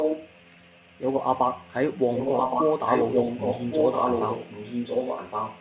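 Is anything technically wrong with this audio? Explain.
Yes. An echo leak is heard from 0.0 to 0.98 s and again from 2.14 s to the end. A delayed copy of the speech, trailing by about 1.12 s, returns a little below the direct sound at first and then at roughly equal level. The likely cause is a loudspeaker on the far end whose echo canceller let its microphone pickup through. On a spectrogram, each syllable's pattern repeats 1.12 s later, stacked on the speech and cut off at 4 kHz like the rest of this narrowband call audio.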